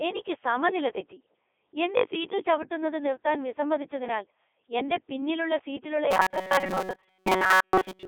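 The speech is carried through the Codec 2 vocoder throughout, and the heavy damage fits its 3.2 kbit/s mode. Voices are rebuilt from sine waves, sounding buzzy and robotic, confined to 300 Hz–3.6 kHz. From 6.11 s to the end at 8.08 s, right after "പിന്നിലുള്ള സീറ്റിലുള്ള", robotic sound from repeated short buffers appears. A rigid metallic buzz at 188 Hz sets in. The likely cause is a roughly 5 ms chunk being replayed while most of the real audio is skipped.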